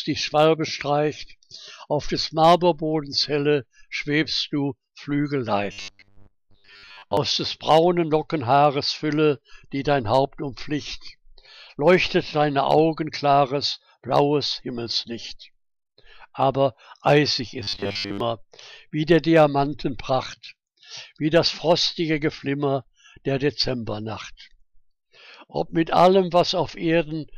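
Twice the audio goes into a robotic sound from repeated short buffers, 5.72 to 7.17 s and 17.63 to 18.20 s, a rigid metallic buzz locked at 100 Hz. That's likely a 10 ms chunk looping while fresh audio runs late, with most of the real signal dropped.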